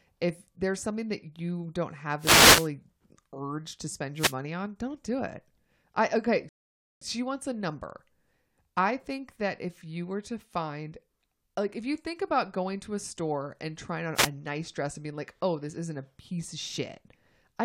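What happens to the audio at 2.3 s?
A short swish of static breaks over the speech from 2.18 to 2.70 s, a wireless microphone noise hit where reflections cancel the FM signal and receiver noise rises.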